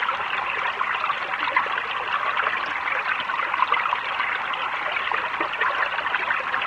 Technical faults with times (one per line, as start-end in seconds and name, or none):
none